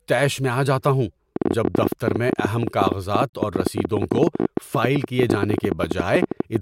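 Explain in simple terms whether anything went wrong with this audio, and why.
A train of clicks runs from about 1.36 s to 6.57 s: roughly seventy sharp ticks at around 14 per second, unevenly spaced, heard over the speech and in its pauses. Something, likely electrical interference or a faulty connection or power supply, kept injecting short pulses.

A gap at a join of encoded pieces opens at 3.30 s, a silence of 36 ms with smeared edges. The recording was compressed in separate pieces and stitched together untrimmed, so each piece's built-in start delay and end padding stayed in.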